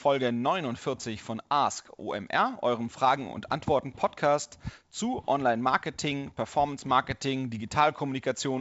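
No technical faults can be heard in this speech.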